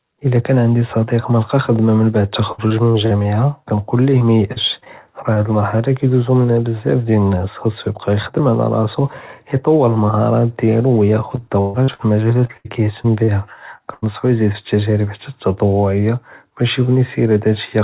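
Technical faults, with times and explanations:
2.52–3.26 s: repeated packet loss (robotic sound). Five gaps, the longest 60 ms, are each covered by extending the preceding sound, so about 22% of this stretch is synthetic fill. That gives a choppy texture with brief pieces missing.
4.18–5.38 s: repeated packet loss (robotic sound). Again five gaps, none longer than 38 ms, concealing about 9% of the span. The repeated patching is lighter here but still audible as stutter.
11.36–14.04 s: repeated packet loss (robotic sound). Ten gaps, up to 136 ms, with roughly half a second concealed in total. The longer fills stretch the last sound into choppy, patched speech over the 4 kHz band-limited call audio.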